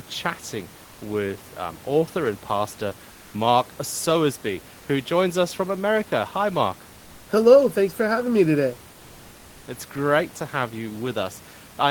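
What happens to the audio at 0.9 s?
From 0.85 to 0.97 s, about 120 ms, the room noise gives way to comfort noise in place of the background. A codec's discontinuous transmission, likely Opus DTX, stopped sending during the pause. The receiver filled it with steady, featureless synthetic noise, about 1 dB quieter.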